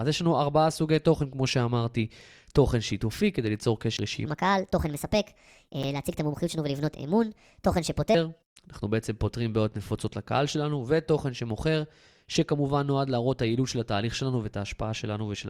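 This is a speech clip with two kinds of fault. Brief Bluetooth stalls cut the sound to silence for 20 ms at 3.97 to 3.99 s and for 8 ms at 5.83 s. Playback then resumes. The likely cause is radio interference delaying packets until the headphone buffer emptied. From 4.26 to 8.15 s there is a section at the wrong speed. It plays 1.37 times too fast, so the speech sounds hurried and raised by about five semitones. This likely comes from resampling to the wrong clock.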